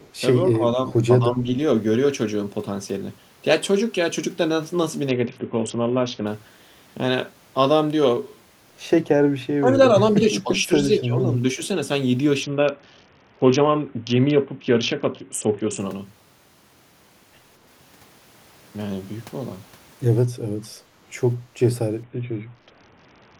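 From 0.00 to 0.11 s there is a brief echo leak: a faint delayed copy of the speech, about 30 dB below the direct signal and trailing it by 234 ms. This is likely a far-end loudspeaker and microphone path whose echo canceller left a small residue that was sent back down the line. It is short, heard as a soft ghost behind the opening sound.

Speech suppressed in double talk appears at 0.46–0.91 s and 1.20–1.47 s, then again at 9.58–9.72, 10.41–10.70, 10.90–11.24 and 11.56–11.60 s. In each the speech level dips sharply for a fraction of a second. The shallowest dips are mild, the deepest around 15 dB. The likely cause is an echo canceller that, faced with both sides talking at once, attenuated the near talker along with the echo it was trying to remove.

A Bluetooth SBC bit pool drop runs from 5.09 to 6.27 s, from 12.43 to 15.80 s, and from 22.03 s to the end. Across each stretch the treble goes dull and a gritty, grainy texture rides on the speech; in the first two it clears when quality returns. 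The sound points to the encoder cutting its bit pool from 28 to 6, around 60 kbps, starving the upper sub-bands and coarsening quantisation in the rest.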